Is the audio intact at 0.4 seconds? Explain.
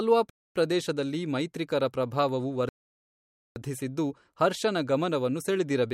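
No. A Bluetooth stall, likely from interference holding up packets, let the headphones' buffer run empty from 0.30 to 0.56 s. The speech cuts to about 0.26 s of silence, then resumes at "ಪ್ರದೇಶದಲ್ಲಿ ಮೈತ್ರಿಕರ ಪ್ರಭಾವವು".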